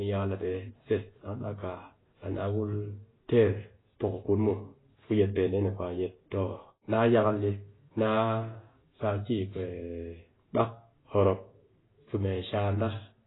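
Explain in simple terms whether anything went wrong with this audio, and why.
Something did go wrong, and it affects the whole recording from start to finish. The speech sounds dull and muffled because nothing is left above about 3.9 kHz, which strips away the crisp, airy parts of consonants. The texture is heavily smeared and warbly. This points to heavy AAC compression, likely squeezed too hard to save space. The encoder threw away the upper sound range and roughly approximated much of what remained.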